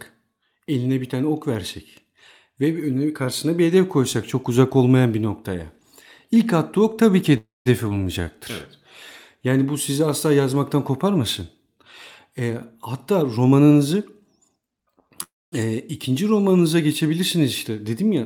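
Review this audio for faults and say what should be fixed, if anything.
Call audio freeze at 7.37 to 7.68 s, just after "attığı ok tabii ki", and again at 15.23 to 15.54 s. Each time the sound stalls and the last fragment is stretched into a fading buzz for about 0.28 s and 0.29 s. Roughly 0.18 s and 0.23 s of that is plain silence before the speech resumes exactly where it stopped. Nothing is lost, but a gap is inserted and the delay grows by the same amount. The likely cause is packets held up in transit, so the jitter buffer ran dry and the receiver concealed the wait. Fix: give the jitter buffer more adaptive headroom, or address the network path delaying packets in bursts.

Skip ahead at 7.90 to 7.93 s, shortly after the first freeze. Playback jumps forward over about 70 ms of speech, and the two sides are butted together with only about 10 ms of fill between them. A stretch of audio was discarded outright, which trims the delay by around 50 ms but chops out part of a sound. 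Fix: let the jitter buffer drain surplus audio by gradual time compression rather than dropping whole stretches.

Jitter buffer speed-up from 12.41 to 14.78 s. The speech runs at about 112 % of normal speed with its pitch unchanged, so this passage sounds hurried. The receiver was holding more audio than its target and shaved off short pitch-period-sized pieces again and again, removing around 0.3 s in total to pull the delay back down. Fix: spread the catch-up over a longer span with a gentler rate, so no stretch of speech is noticeably quickened.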